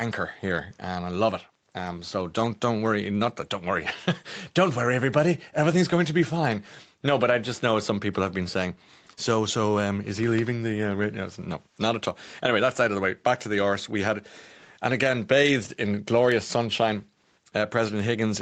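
No technical faults can be heard anywhere in the speech. Nothing reaches above 8 kHz and the lowest bass is trimmed, as expected from call microphone processing and a WebRTC call path, with the band limit pointing to an Opus codec running at wideband.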